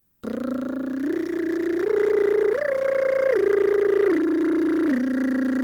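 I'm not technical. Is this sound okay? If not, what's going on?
No. In the first 0.21 seconds, the real background is replaced by comfort noise: a smooth, even hiss, a little quieter than the room sound that follows. This likely comes from the sending end pausing its transmission while it judged nothing important was playing, with the receiving end filling that gap with synthetic noise. After about 0.21 seconds, the genuine background returns.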